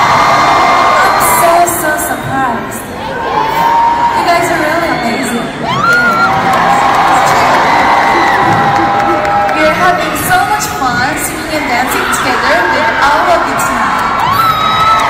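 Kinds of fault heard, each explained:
Hard clipping, throughout the clip: the audio is driven about 8 dB beyond what some stage in the chain can pass, so every peak that crosses the ceiling is sliced off flat instead of following its natural curve. Only a small share of the samples, a few percent, sit above that limit, so the damage shows on the louder moments as a gritty crackle and brittle edge. The squared-off tops add harmonics high in the spectrum.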